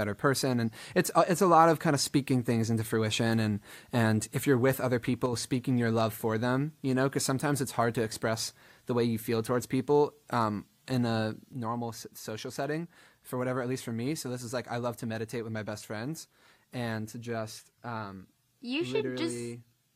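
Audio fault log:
5.26–5.33 s and 11.53 s to the end, one channel drops out: after "if you're with other" and again after "people um in a", the level falls abruptly by about 6 dB, likely from one stereo channel going silent before the mono sum. The waveform shows a sudden step down in amplitude, briefly and then for the rest of the clip, and the spectrogram dims evenly across all frequencies.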